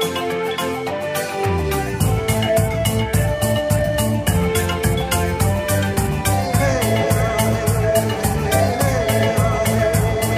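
Nothing stood out as a technical problem on listening to the clip.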